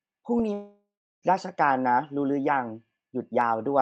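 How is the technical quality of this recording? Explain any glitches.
There's one clear glitch here, a long network dropout, heard through a call path where the top end stops around 8 kHz, consistent with Opus at about 32 kbps. From 0.53 to 1.25 s the sound stops arriving. The tail of the last sound gets stretched into a fading buzzy hiss, then about a third of a second of near-silence, before audio resumes with roughly 0.7 s simply gone. Likely cause is lost packets, with the receiver concealing the gap.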